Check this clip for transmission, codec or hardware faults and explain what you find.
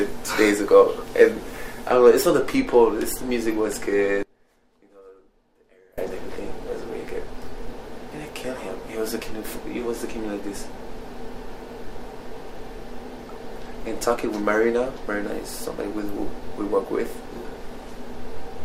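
There's one clear fault: an audio dropout to a faint residue from 4.23 to 5.98 s. For about 1.75 s the sound cuts away abruptly, leaving only a faint trace of itself roughly 30 dB below its normal level, then snaps straight back. That's likely a break in the signal feed upstream while the rest of the chain stayed live, so a little leakage kept coming through. The hard edges at both ends are what separate it from a natural pause or fade.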